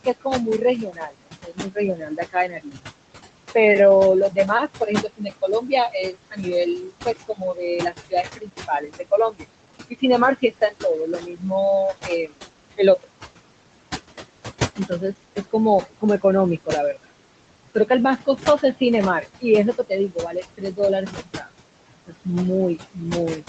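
Noise suppressor artifacts run through the whole clip. The suppressor pulls the room noise down by about 21 dB between phrases and lets it rise again under speech, leaving a residue. On a spectrogram, the noise floor pumps frame by frame in speckled patches.

Speech cut by the noise suppressor occurs at 0.05–2.82 s, 4.3–11.43 s, 12.04–13.07 s, 14.77–17.11 s, 17.75–21.49 s and 22.07 s to the end. Quiet speech is taken for noise and dropped by about 19 to 22 dB, so soft consonants and word endings sound swallowed. The loss totals roughly a second and a half in each of the first two spans, and between about 0.2 and 1 s in each of the next three. The waveform shows word tails dropping in level, and the spectrogram shows faint consonant energy blanked along with the background.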